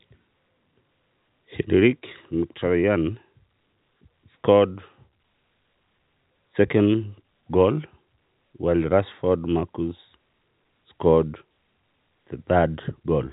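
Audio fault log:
Nothing to log here: the speech comes across as ordinary telephone audio, with the G.711 coding holding everything under about 3.8 kHz just as that format should.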